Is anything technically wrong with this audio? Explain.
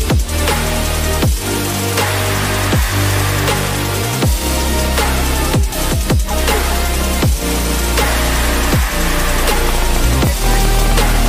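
Yes: from 9.69 to 11.27 s, a train of clicks, about 13.4 per second, irregularly spaced, likely from interference. On the waveform they appear as roughly twenty sharp spikes about 10 dB above the sound, and on a spectrogram as thin vertical lines.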